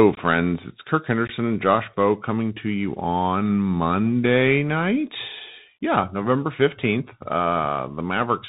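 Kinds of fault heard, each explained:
Bluetooth CVSD headset codec: The speech runs through the narrowband headset link for the full clip, coded as one up-or-down bit per sample with an adapting step size, which fits a 64 kbit/s CVSD stream. Nothing above 4 kHz survives, so the voice sounds boxed in. Loud, bright passages outrun the step and distort, s sounds come out scratchy, and a granular hiss sits under the speech throughout. The damage is plainly audible.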